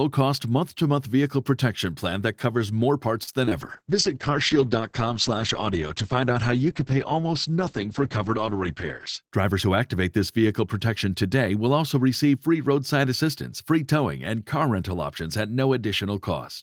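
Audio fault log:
3.23–3.29 s, short stall from a late packet: just after "plan that covers more", a packet arrived late and the jitter buffer ran dry, so the receiver held the last sound for 39 ms; nothing is lost, but that sound drags.
3.45–3.53 s, short concealed packet loss (two in a row, at 3.45 and 3.49 s): two consecutive 20 ms stretches never reached the decoder, so the receiver extrapolated from the preceding audio, leaving a brief smear.
3.59–9.28 s, call bitrate drop: the bandwidth estimate fell and the encoder went from 32 to 9 kbps for about 5.6 s, cutting audio above 8 kHz, so the sound turns muffled and rough.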